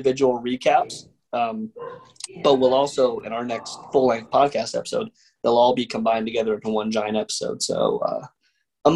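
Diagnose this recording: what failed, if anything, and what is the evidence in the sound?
Nothing in the recording points to a failure at any stage of the chain, with the signal holding continuous and steady throughout and no dropouts, level jumps, distortion or timing disturbances to be heard anywhere in it.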